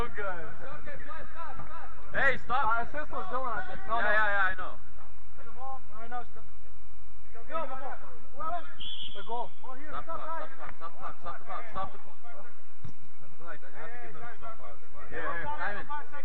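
A system hang loop runs from 6.83 to 7.25 s: the host froze while the hardware replayed one 85 ms chunk five times at 11.7 Hz, which fits a 4096-sample buffer. It gives a machine-gun stutter and drops nearly half a second of audio.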